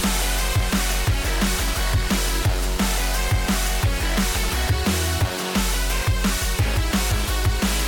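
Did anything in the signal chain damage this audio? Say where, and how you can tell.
No, nothing in the signal chain stood out as a problem on listening.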